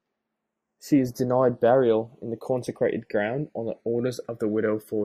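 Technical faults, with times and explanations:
Throughout, channels drifting apart: the left-right offset in this speech grows to under a millisecond, which fits clocks roughly 100 ppm apart. Summed to mono, comb notches sweep slowly downward, heard as slow flanging and seen on a spectrogram as descending dark bands.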